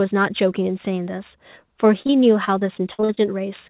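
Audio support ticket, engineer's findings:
Repeated packet loss (robotic sound), 2.02–3.19 s: choppy stretch with eight short gaps, longest 58 ms, about a fifth of the span concealed. Probable component: network/jitter buffer. Concealment extends the last sound into each hole. Band-limited to 4 kHz, consistent with G.711 mu-law.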